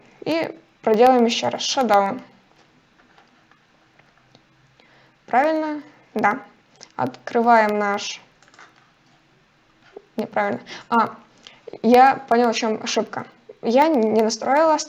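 Periodic USB or driver dropouts run from 0.07 s to 14.82 s, repeating every 0.125 s. Something blocks the audio path at that fixed interval, and each time a tiny fraction of a millisecond is replaced with silence, producing evenly spaced ticks wherever sound is present.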